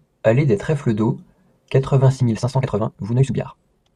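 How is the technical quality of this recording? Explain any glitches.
The recording has one clear glitch. From 2.14 s to the end, a time-stretched section makes the speech suddenly run about 1.82 times faster while its pitch stays where it was. It sounds rushed. The likely cause is software compressing that stretch to fit a shorter length by dropping small pieces of audio. What sets it apart from a plain speed-up or playback-rate error is the unchanged pitch, so the voice never turns higher or chipmunk-like.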